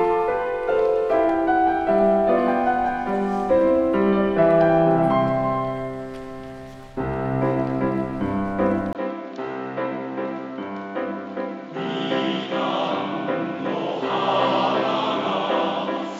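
At 8.93 s a 20 ms gap is followed by a duller, narrower sound through to the end: nothing above 7.3 kHz, level down about 5 dB, and a new noise floor roughly 35 dB below the signal. This likely reflects an input switched to a poorer device.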